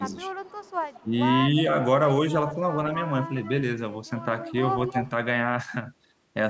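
A faint delayed copy of the speech trails the talker at 0.11 to 0.18 s, and again more clearly from 0.45 to 1.07 s. It lags the original by about 192 ms and sits roughly 35 dB, then about 25 dB, below it. This is echo leak. The far side's echo canceller likely failed to remove its loudspeaker's output from its microphone, so the talker's own speech returned.

At 1.03 to 1.13 s, as that echo overlaps the talker, the speech briefly sinks by about 10 dB for roughly 100 ms. This is speech suppressed in double talk: the canceller likely couldn't tell the talker apart from the returning echo and turned both down together.

The echo leak returns at 3.36 to 3.63 s, 4.42 to 4.60 s and 4.85 to 5.10 s. It is now delayed by about 215 ms and grows louder each time, from about 20 dB to about 10 dB below the speech.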